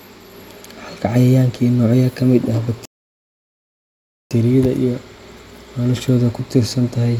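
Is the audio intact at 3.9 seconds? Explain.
No. A rebuffering stall runs from 2.85 to 4.31 s. Playback starves and goes silent, then resumes exactly where it stopped, adding about 1.45 s.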